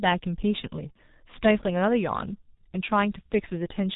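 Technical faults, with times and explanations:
Throughout: G.723.1 codec. The speech is band-limited below 4 kHz, muffled and hoarse, with smeared consonants. The coarse 30 ms frame coding and slow updates to the voice model do heavy damage, which fits the 6.3 kbit/s mode.
0.92–0.97 s and 2.55–2.58 s: VoIP packet loss concealed by the speech codec. Each gap is brief, consistent with a single lost 30 ms frame. The decoder carries the previous pitch and filter forward at falling gain, so the speech turns briefly into a fading buzzy tone or coloured noise, then stays weak or distorted as later frames recover.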